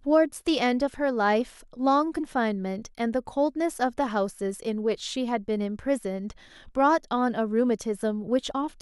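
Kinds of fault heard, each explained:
Compressed frames skipped: at 2.16 to 2.20 s and again at 8.50 s, the speech jumps forward, dropping roughly 70 ms and then about 20 ms. Whole coded frames were lost or rejected as damaged.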